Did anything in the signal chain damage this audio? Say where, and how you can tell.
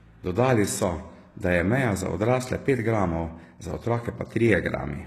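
Yes, at the codec stage, across the whole clip. The speech sounds plainly damaged: sibilants come out gritty and metallic, and nothing reaches above 12.3 kHz. That likely points to HE-AAC compression at around 16 kbps, with its copied-up treble not lining up with the real harmonics.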